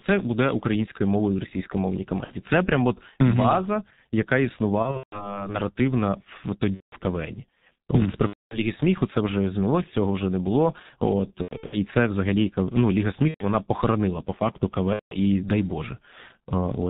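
The whole clip passes through the G.723.1 codec at about 6.3 kbit/s, and the damage is heavy. Nothing above 4 kHz survives, so the speech sounds muffled. The codec works in 30 ms frames and updates its model of the voice slowly. Quick changes get smeared across each frame. Consonants blur together. The voice takes on a rough, hoarse edge throughout.

VoIP packet loss, concealed by the speech codec, breaks in seven times: at 2.24 s, 4.82 s, 6.75 s, 8.27 s, 11.42 s, 13.28 s and 14.93 s. When packets go missing, the decoder keeps extending the last pitch and filter it received, turning the gain down frame by frame. Each gap becomes a drawn-out buzzy tone or tinted noise that fades. The first gap is short, about 60 ms, which fits two lost frames. The others run from roughly 120 to 240 ms. At 4.82 s and 11.42 s the losses are scattered over about 300 ms. Their longest unbroken stretches are 150 ms and 90 ms. 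Since each frame builds on the one before, the voice stays weak or distorted briefly after each gap.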